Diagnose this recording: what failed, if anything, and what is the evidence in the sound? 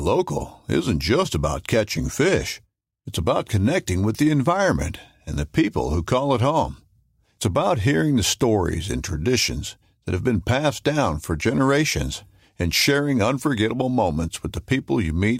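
Nothing failed here: no stage in the chain leaves any audible mark on the speech, so there's nothing to diagnose.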